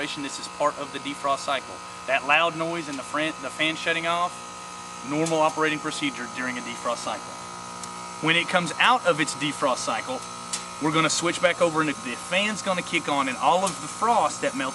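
No technical faults can be heard anywhere in the clip.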